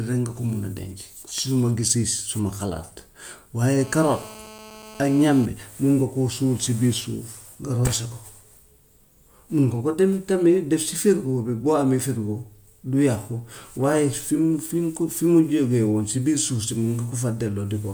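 From 3.79 to 5.46 s a hard, raspy GSM phone buzz sits under the speech, steady at 217 Hz with dense harmonics, about 19 dB below the signal. A nearby 2G handset on a call pulses its transmitter at that rate, and the audio circuitry rectifies the radio bursts.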